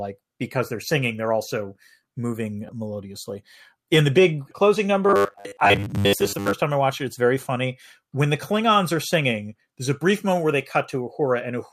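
From 5.07 to 6.53 s the speech turns into a rigid metallic buzz at 100 Hz, robotic sound from repeated short buffers, likely from a 10 ms chunk replayed in place of most of the real audio. Unlike a plain pitch shift, the buzz stays fixed while syllables still roughly track through.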